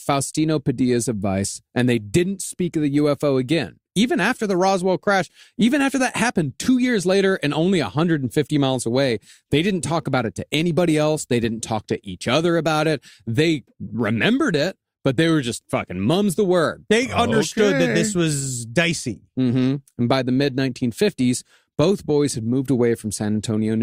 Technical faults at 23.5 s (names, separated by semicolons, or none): none